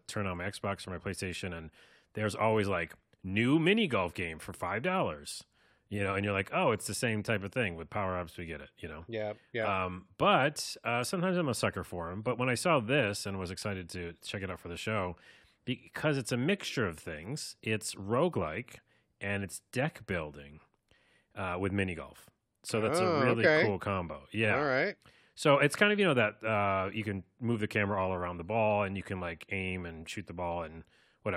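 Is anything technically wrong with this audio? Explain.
No, nothing technically wrong can be heard in this speech recording. There is no fault here that needs explaining or fixing.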